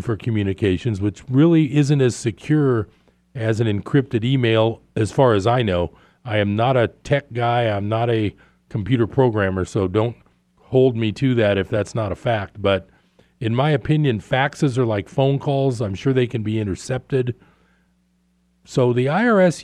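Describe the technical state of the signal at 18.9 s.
At 18.9 s the speech signal is intact, with no audible fault at that point.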